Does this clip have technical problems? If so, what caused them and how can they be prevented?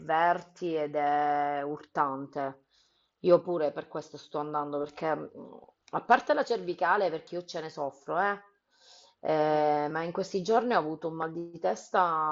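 No, there are no technical problems in this speech clip. It has the sound of a Bluetooth mSBC headset codec working as intended, with nothing above about 7.8 kHz.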